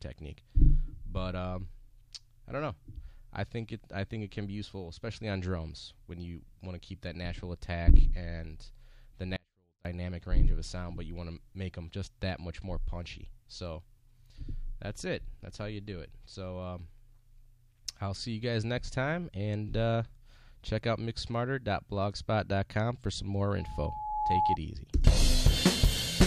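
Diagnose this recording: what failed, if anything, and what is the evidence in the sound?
Audio dropout to a faint residue from 9.36 to 9.85 s: the signal vanishes abruptly for about 0.49 s, leaving only a faint residue about 35 dB below normal level. The waveform collapses to a thin sliver between clean edges. The likely cause is a brief loss at the converter or buffer stage with the downstream path still live.

Loudspeaker feedback squeal from 23.59 to 24.57 s: a single 853 Hz tone swells over well under a second until it sits a few dB above the programme. On a spectrogram it is a bright horizontal line at 853 Hz that thickens as it grows. An acoustic loop from the playback loudspeaker into the microphone exceeded unity gain at that frequency.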